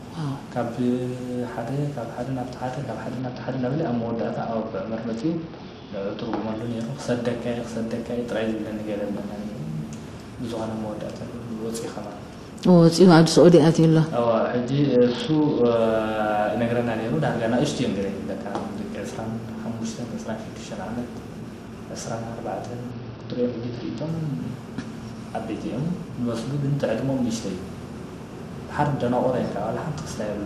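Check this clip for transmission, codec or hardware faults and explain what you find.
There are three Bluetooth SBC bit pool drops, at 3.19 to 6.59 s, 14.24 to 15.75 s and 22.91 to 24.09 s. A congested link forced a lower SBC bit pool, which fits a fall from 31 to 8, near 66 kbps. The top sub-bands get almost no bits, so the treble dulls and gritty noise rises until the rate recovers.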